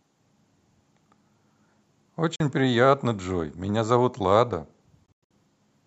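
Bluetooth dropouts at 2.36 to 2.40 s and 5.06 to 5.31 s break up this speech clip with sudden silent holes. The first gap lasts about 40 ms, which fits two lost packets. The second is a cluster of gaps totalling about 180 ms over roughly 240 ms, with the longest about 100 ms. After each hole the speech resumes further along, as if it had kept playing. Audio packets likely failed to reach the headphones in time and were discarded.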